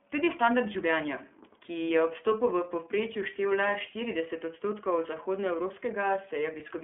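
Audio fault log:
Throughout: iLBC codec. The speech is band-limited, with nothing above about 3.6 kHz, and sounds a bit rough and synthetic because each 30 ms frame is coded independently, which fits roughly 13.3 kbps.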